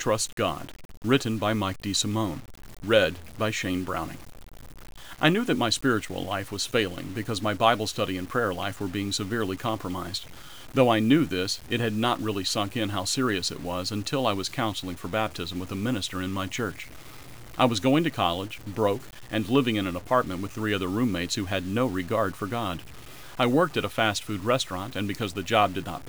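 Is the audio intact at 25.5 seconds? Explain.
No. At 25.5 seconds, as across the whole speech clip, the sound is grainy and gritty, a distortion that tracks the signal and sits roughly 25 dB below it. The likely cause is low bit depth without dither: truncation to about 7 bits, so the rounding error follows the waveform.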